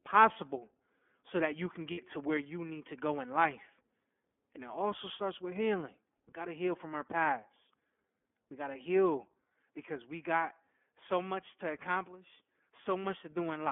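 Speech, carried throughout by the iLBC codec, leaves the audio confined to a telephone band of roughly 250 Hz to 3.4 kHz with a slightly rough, synthetic texture that is plainly audible. That fits iLBC's 30 ms mode at around 13.3 kbps. That sets it apart from a simple band-limited line, which would sound muffled but not grainy. From 1.91 to 1.99 s there are lost iLBC frames, a gap consistent with two 30 ms packets missing. The decoder fills it by repeating the last pitch cycle with added noise, so the sound holds as a brief buzzy, sustained tone. Because each iLBC frame decodes on its own, clean sound returns immediately after, unlike codecs whose concealment smears errors into the following frames. At 7.1 to 7.12 s a harsh crackle lands on a loud peak, with waveform tops flattened at the converter's limit, about 0 dB over it, and around a fifth of the samples in that stretch clipped. This is likely microphone overload, with input gain set too high so the peaks hit the converter's ceiling. 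It differs from codec distortion in being tied to sound level rather than spread evenly, and it adds a hard, broadband edge instead of the codec's grainy roughness.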